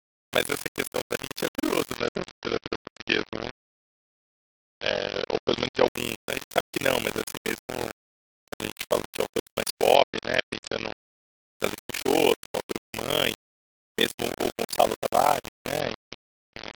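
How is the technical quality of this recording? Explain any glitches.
The technical quality is poor. Three faults are audible, two of them across the whole clip of speech.

Low bit depth without dither runs throughout. The speech sounds grainy and harsh. Quiet passages break up into a sputtering grit that follows the voice. The noise sits only about 10 dB below the signal. That points to very few bits, around four. The cause is likely plain rounding with no dither. Because the error tracks the signal, it changes with every syllable instead of forming a steady hiss.

Overlap-add ripple is also present throughout. The level pulses rapidly, roughly 40 times a second. That gives the speech a rough, robotic tremolo. The dips are very deep, about 60 dB, so the sound almost vanishes once per frame. This happens when audio is split into windowed frames and rebuilt with overlaps that do not add up to a constant gain. 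Each frame boundary then becomes a swell and a dip.

A Bluetooth SBC bit pool drop occurs three times. The first runs from 1.98 to 5.88 s, just after "questão realmente é curioso". The second runs from 9.95 to 11.12 s, after "fala de autores mais". The third runs from 15.80 s to the end. In each stretch the treble goes dull and extra grit rises. This fits the link cutting the bit pool from 31 to about 7, near 61 kbps. Top sub-bands lose their bits, and the rest are coarsely quantised.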